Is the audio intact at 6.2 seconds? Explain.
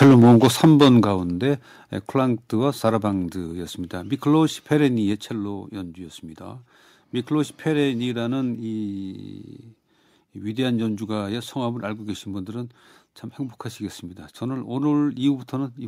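Yes, the audio is intact at 6.2 seconds, with no dropout, click, distortion or other fault audible at that moment.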